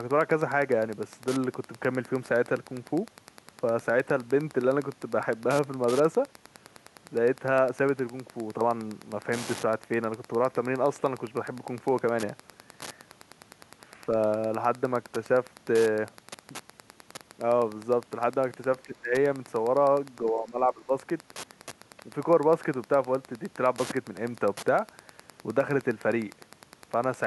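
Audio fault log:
throughout: Wi-Fi interference. A nearby Wi-Fi radio's beacon, sent every 102.4 ms, is being picked up and rectified by the audio circuit, so a steady ticking runs about ten times a second under the speech, around 25 dB below it.
18.85–19.13 s and 20.24–20.93 s: speech suppressed in double talk. An echo canceller likely met both sides talking at once and, unable to separate its talker from loudspeaker echo, turned the speech down. It dips by around 20 dB, then around 15 dB.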